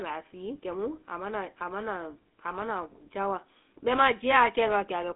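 From start to finish, the speech carries GSM full-rate codec damage. The band is limited to roughly 250 Hz to 3.4 kHz. The voice sounds plainly buzzy and gravelly. The coder keeps sparse pulse excitation, which fits a 13 kbps GSM link.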